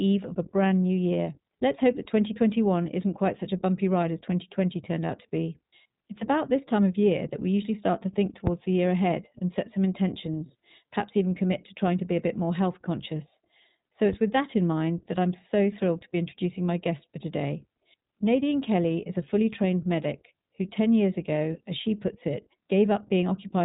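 The whole speech clip runs through the iLBC codec, with nothing above 3.8 kHz and plainly audible roughness from its independently coded 20 ms frames, which fits the 15.2 kbps mode. At 8.47 to 8.54 s, between "usually start to think" and "the year ahead and", a phantom power thump lands as a supply is switched on or off on a live input, a deep knock dying away in about 14 ms. Another thump hits at 14.13 to 14.48 s, just before "in mind that I'm", and this one takes about 80 ms to decay.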